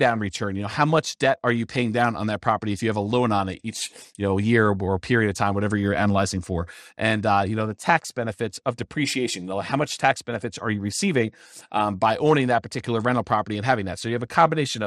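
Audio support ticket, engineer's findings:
Speech dull and band-limited for the whole clip, with gurgling, granular distortion on top. Likely cause: MP2 compression at a starved bitrate; the damage fits roughly 80 kbps. Upper sub-bands drop out and flicker back, and the remaining bands are coarsely quantised, producing that grainy, watery texture.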